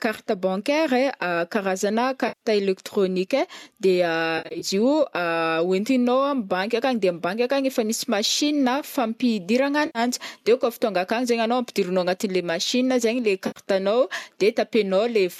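Speech with four short dropouts from AAC frame loss with concealment. At 2.28–2.41 s, 4.38–4.65 s, 9.86–9.99 s and 13.47–13.60 s, the decoder fills gaps from the last good spectrum. Each sounds like a smeared, noisy or phasey patch. The second is broken, with the longest run about 70 ms.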